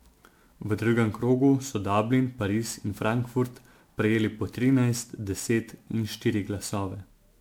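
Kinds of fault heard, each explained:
Generation loss: the speech sounds swirly, smeared and hollow, with blurred consonant attacks, far worse than a single 128 kbit/s MP3 pass would leave. It's likely from being re-encoded around fifteen times, each pass on a shifted frame grid stacking new noise and spectral holes.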